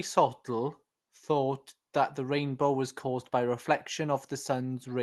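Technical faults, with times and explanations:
No faults found; the speech runs over a normal call path, its top end stopping near 12 kHz, which fits Opus at about 20 kbps.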